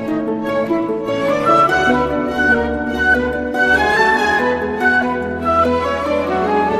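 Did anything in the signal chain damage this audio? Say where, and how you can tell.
No, nothing in the signal chain damaged this audio.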